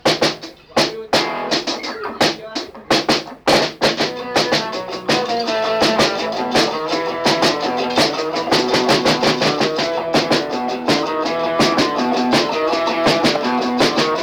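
Harsh crackle rides the loudest peaks throughout: hard clipping, with the audio driven about 9 dB past full scale so a few percent of samples get cut flat.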